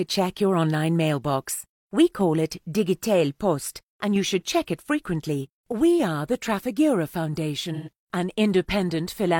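From 7.73 to 7.89 s the sound turns briefly smeared and phasey, a grainy patch where the detail blurs before the clean signal returns. This is AAC frame loss with concealment. About 128 ms of coded audio went missing, which fits roughly three lost frames. The decoder covered the gap by reusing the last good spectrum with scrambled phase or interpolated energy, so the hole is filled with a hazy approximation rather than an audible dropout.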